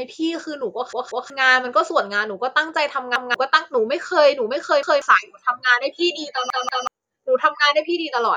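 A speech recording with repeated buffer stutters at 0.93–1.30 s and 6.50–6.87 s, where a 186 ms piece plays twice more, and at 3.16–3.34 s and 4.83–5.02 s, where it replays once. Each repeat fits an 8192-sample buffer resent when new audio arrived late, skipping about 0.4 s or 0.2 s of speech. Unlike a dropout there is no gap of silence, and unlike an echo the copies are identical, hard-joined and do not overlap or decay.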